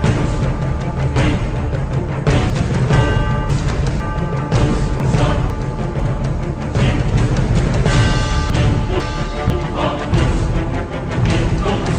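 Between 2.5 and 4.0 s, then 5.0 to 6.0 s and 8.5 to 9.5 s, the audio jumps back on itself: chunks out of order. A 500 ms block plays two blocks late in the first case and one block late in the others, so nothing is missing but the sequence is scrambled and each region has three abrupt joins. On a waveform these appear as sudden level steps; a spectrogram shows thin vertical broadband lines with mismatched patterns on either side.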